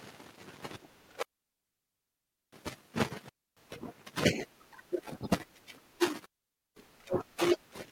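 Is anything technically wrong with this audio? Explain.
Yes. The speech has three digital wireless dropouts, at 1.23 to 2.53 s (1.3 s), 3.29 to 3.57 s (0.28 s), and 6.26 to 6.76 s (0.51 s). In each, the radio link lost too much data for the receiver to recover, so it muted the output with a very fast fade. The result is a clean hole of near silence, with no crackle or noise burst at either edge.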